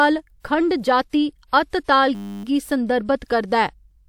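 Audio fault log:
0.40–0.44 s, 1.09–1.13 s, 1.47–1.53 s, 1.84–1.88 s: pre-echo. Before each sharp speech onset there is a smear of hiss lasting 43, 40, 57 and 45 ms. The codec spread its quantisation noise across the whole transform block, so noise meant for the loud attack leaked into the quiet moment before it, and the attacks lose crispness. A spectrogram shows a faint broadband haze just ahead of each onset, and the waveform shows low-level noise before the attack.
2.15–2.44 s: system hang loop. The system stalled while the playback hardware kept cycling one 10 ms buffer, repeating it 29 times. The exact repeats at 100 Hz replace the speech with a steady buzz at that rate. A spectrogram shows a frozen pattern of evenly spaced harmonics at multiples of 100 Hz with vertical striping, and the waveform shows one identical 10 ms cycle repeated across the whole span.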